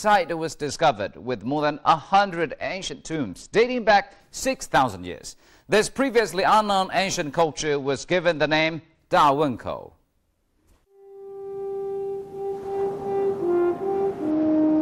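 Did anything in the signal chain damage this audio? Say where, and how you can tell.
Yes. A Bluetooth SBC bit pool drop at the codec stage spans 0.66 to 4.21 s and 7.42 to 9.00 s. The treble dulls and gritty noise rises, which fits the bit pool falling from 28 to 10, around 84 kbps: top sub-bands starve, the rest are coarsely quantised.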